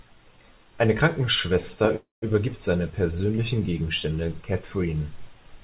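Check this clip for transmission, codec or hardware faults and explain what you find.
One fault. From 1.96 to 2.34 s there is a call audio freeze. Delayed packets likely emptied the jitter buffer, so the last sound fades into silence for about 170 ms. The speech then resumes intact, 0.26 s late.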